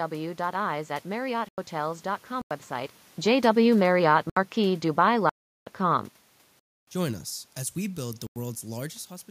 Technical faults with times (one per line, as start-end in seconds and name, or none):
1.49-1.58 block of digital silence
2.41-2.51 block of digital silence
3.52-6.11 automatic gain falling
4.30-4.37 block of digital silence
5.29-5.67 block of digital silence
6.59-6.87 block of digital silence
8.27-8.36 block of digital silence